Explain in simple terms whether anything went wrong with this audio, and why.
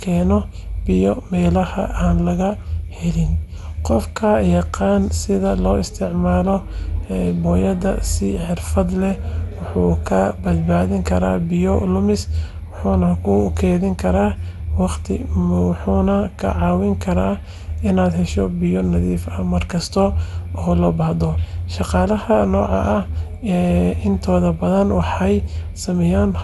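Generation loss runs through the whole speech clip: it sounds swirly, hollow and smeared, with nothing above 11.8 kHz, likely from being re-encoded around seven times.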